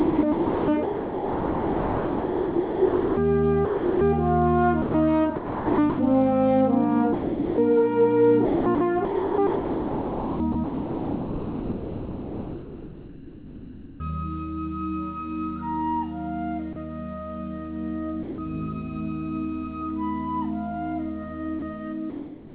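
From 0.0 to 4.01 s the sender's voice detector likely kept switching transmission on and off, and this sound chopped by the voice detector replaces about 3.3 s of the audio with comfort noise. The result is choppy. The same chopping, again likely from the detector, returns at 4.82–5.99 s with about 0.63 s filled.

At 7.13–7.58 s the detector likely judged quiet sound to be background and stopped sending. This sound dropped by the voice detector leaves 0.45 s of steady comfort noise until sending resumes.

From 8.45 to 14.0 s the detector likely toggles again, and about 4.9 s of the span is replaced by comfort noise. The audio breaks up repeatedly.

Two more drops, likely from the detector misreading quiet passages, follow. A 30 ms gap at 16.73 s is filled with comfort noise, and at 18.23–18.38 s 150 ms is lost.

From 21.59 s to the end, sound chopped by the voice detector likely recurs, with about 0.48 s replaced.

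Throughout, nothing is heard above 4 kHz, which points to a G.711 A-law call path.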